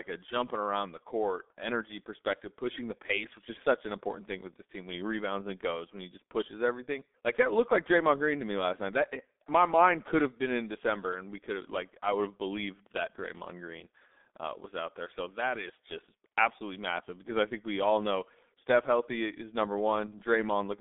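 Speech runs through the G.723.1 codec for its whole length. Nothing survives above 3.7 kHz and the line band sits near 250 Hz to 3.6 kHz, so the sound is muffled and hoarse. The heavy smearing of consonants points to a very low bitrate of around 6 kbit/s.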